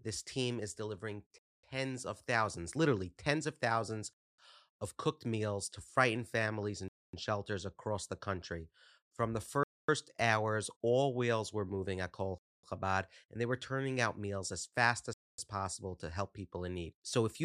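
Speech with a gap between chunks: hard-edged 250 ms silences at 1.38, 4.13, 6.88, 9.63, 12.38 and 15.13 s, after each 2.5 s chunk of audio, such as after "team is delivering".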